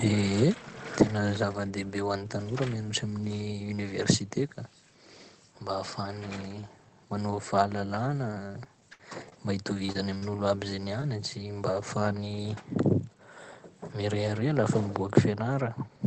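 Speech carried over a call link shows repeated packet loss (robotic sound) in two bursts: from 8.47 to 9.32 s, six gaps up to 62 ms long patch about 15% of the stretch, and from 9.74 to 10.23 s, five gaps up to 41 ms long cover about 23%. Each hole is filled by extending the preceding sound, and the next hole arrives before the voice recovers. The result is choppy sound with pieces missing rather than isolated glitches. It differs from steady coding noise because it comes and goes with the losses. Two further instances of short concealed packet loss fall back to back at 11.01 and 11.02 s, each replacing about 10 ms of missing audio. They come through as a brief smear or wobble that is too short and too isolated to turn robotic. Around all of this, the Opus call path limits the top end to about 8 kHz, which fits a low bitrate near 20 kbps.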